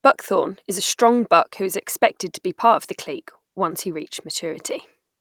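No technical faults can be heard anywhere in the speech, and the signal stays steady and intact throughout.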